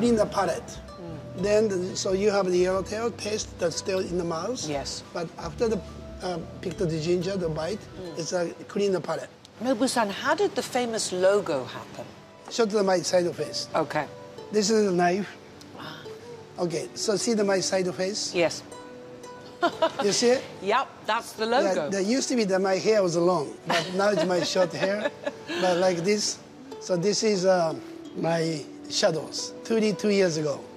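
No technical faults are audible anywhere in the audio.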